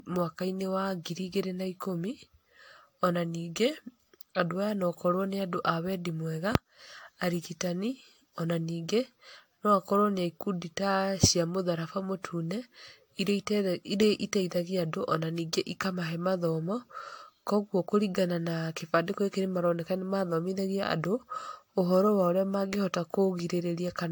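Throughout, swirly hollowness and smeared attacks exceed what a single AAC pass would cause, which points to generation loss, likely from about seven re-encodings.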